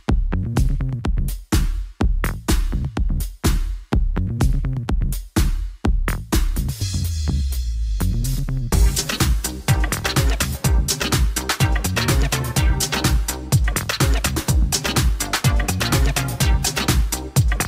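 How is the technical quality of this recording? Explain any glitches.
The recording is compromised by a continuous fault. From about 0.4 s to the end there is sample clock jitter: a grainy hiss and roughness that swells on loud, bright passages and drops away in quiet moments. The converter's sampling clock is wandering by a few microseconds, so each sample is taken slightly early or late. Where the waveform changes steeply, that timing error becomes a sizeable amplitude error, roughly 25 dB below the signal, which is why it tracks loudness and high frequencies.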